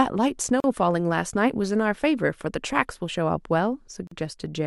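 A speech clip with two gaps at joins of encoded pieces: silent dropouts of about 39 ms at 0.60 s and about 42 ms at 4.07 s. Each comes from separately encoded segments spliced untrimmed, leaving encoder start delay and final-frame padding. The edges are smeared by the codec, and the speech resumes exactly where it stopped.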